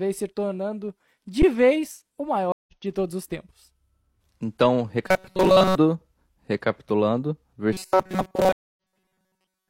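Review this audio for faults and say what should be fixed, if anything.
At 1.42 s, between "se tornando" and "vez o", the sound briefly freezes flat for about 10 ms and then picks up with only a soft click. This is an underrun with held sample: the output buffer ran dry, the converter held its last value, and playback continued where it had stopped.

From 2.52 to 2.73 s, after "vez o", there is 152 ms of silence. The audio returns at "de todos os tempos" about 150 ms further along, with a muted or faded start. The same thing happens at 8.53 to 8.77 s, where 243 ms of silence is followed by a jump of roughly 0.3 s. This is a stream reconnect: the connection dropped, the player rejoined the live stream later, and it started a fresh decoder.

From 5.07 to 5.75 s, and again from 7.73 s to the end, the speech turns into a rigid, metallic buzz at 188 Hz that only loosely follows the speech. This is robotic sound from repeated short buffers. 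It is likely caused by late-arriving audio being covered by looping the last segment, which fits a buffer of about 5.3 ms repeated for most of each stretch.

To prevent these faults, enlarge and stabilise the playback and network buffering so data arrives ahead of need, and make the connection resilient enough that the stream does not drop.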